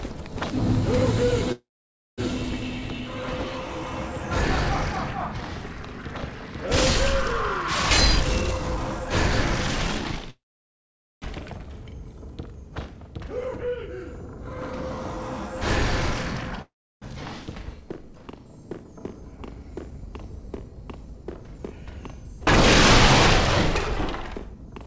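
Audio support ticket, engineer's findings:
Call audio freeze at 1.52–2.21 s, 10.30–11.25 s and 16.62–17.05 s: likely delayed packets draining the jitter buffer. Last sound stretched into a fading buzz or hiss, then silence (0.55, 0.84, 0.32 s), resuming where it stopped with nothing lost.

Jitter buffer speed-up at 7.97–10.30 s (122%, roughly half a second cut, running straight into the second freeze) and 18.71–22.46 s (108%, about 0.3 s cut): buffer over target, pitch-period slices removed repeatedly. Sound hurried, pitch unchanged. Call path band-limited at 8 kHz, fitting G.722 at 64 kbps.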